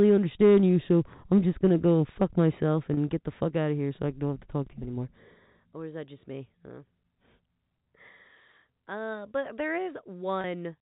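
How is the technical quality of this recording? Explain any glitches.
The audio is telephone-band speech carried as G.711 mu-law, so nothing above 4 kHz is present. It has two brief glitches from packet loss with pitch repetition. The first runs from 2.94 to 2.97 s, between "to go fuck myself" and "get the fuck out". The second runs from 10.41 to 10.44 s. Each lasts about 30 ms, consistent with one lost packet. The receiver bridges each gap by repeating the last pitch period, which gives a short held, buzzy tone. A plain dropout would leave silence or a click instead.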